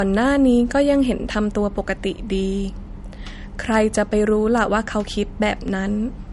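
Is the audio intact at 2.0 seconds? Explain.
No, low-bitrate audio saved at a high bitrate runs through the whole clip, including 2.0 s: the speech sounds dull and smeared, likely from an earlier MP3 encode near 48 kbit/s that re-encoding couldn't restore.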